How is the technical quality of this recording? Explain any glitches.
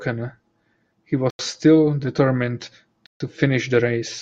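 The speech has two brief gaps. At 1.30 to 1.39 s and 3.06 to 3.20 s the sound cuts to silence for 89 and 139 ms, likely a Bluetooth stall from a starved buffer.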